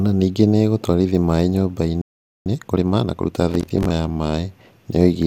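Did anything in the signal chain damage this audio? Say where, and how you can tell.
Yes. The damage is at the playback stage. Right after "ningĩ nĩ ĩgũtwarithia maaĩ" the speech cuts to silence from 2.02 to 2.46 s, a playback stall of about 0.44 s. The player was likely starved of data or blocked, so output stopped.

Playback then hurries to recover. From 2.46 to 3.34 s the speech runs at 1.5 times normal speed with pitch unchanged. That is time-compressed catch-up: small slices are cut out and cross-faded to shrink the backlog.

At the driver or buffer stage, a gritty tearing rides on the speech from 3.51 to 3.90 s. This is processor overload crackle. Around fifteen buffers of roughly 10 ms missed their deadlines. Each gap was filled with stale audio, and the hard edges crackle.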